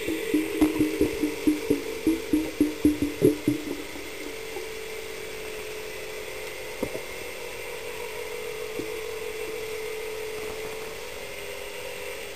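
Two bursts of processor overload crackle tear through the audio, from 0.45 to 0.75 s and again, longer and denser, from 10.37 to 11.30 s. The grit comes from dozens of missed deadlines in quick succession, each repeating a sliver of stale audio, which suggests a buffer of well under a millisecond. Unlike a single dropout or steady clipping distortion, the roughness arrives in clusters and stops cleanly as the load passes.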